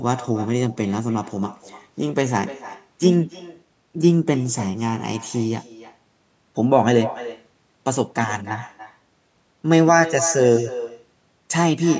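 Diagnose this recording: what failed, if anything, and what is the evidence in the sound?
The far end of this call is playing it over a loudspeaker, and its microphone feeds that playback back into the line with no echo canceller removing it, so this is echo with no canceller. Throughout the speech, every phrase returns roughly a third of a second later, about 16 dB below the original, thinner from its trip through the remote room and the network. The band-limited sound, with nothing above 8 kHz, comes from the normal call microphone processing.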